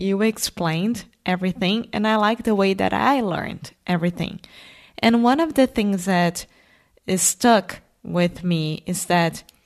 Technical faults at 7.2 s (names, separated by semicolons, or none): none